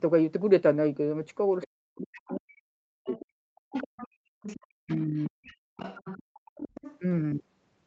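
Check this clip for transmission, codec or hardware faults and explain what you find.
The clip has three echo-canceller faults in the speech, all tied to a loudspeaker playing the far end.

Other side's voice leaking through happens at 1.62 to 1.67 s, 2.27 to 2.36 s, and 3.05 to 6.99 s. A second voice sits under the talker, roughly 15 to 20 dB quieter. The likely cause is that the canceller left loudspeaker echo in the microphone signal.

Speech suppressed in double talk runs from 1.68 to 3.58 s and again from 4.56 to 5.65 s. The talker's voice dips in pieces, by roughly 40 dB at its deepest. It loses about 1.5 s and then half a second in total. Both sides were likely talking at once, so the canceller turned everything down.

Background gated by the echo canceller hits at 4.08 to 4.28 s and 6.23 to 6.34 s. The room sound drops out briefly, by about 35 and 40 dB. It returns once the canceller releases the microphone. 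The call's filtering, with nothing above 8 kHz, is normal.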